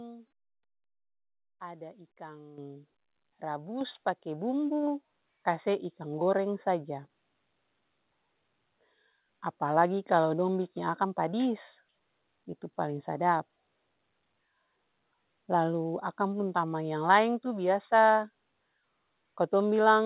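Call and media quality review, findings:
Microphone volume stepped up: auto gain raised mic input in four steps, lifting voice and background together at 2.58, 3.81, 4.83, 5.85 s, by about 9, 5, 2, 1 dB.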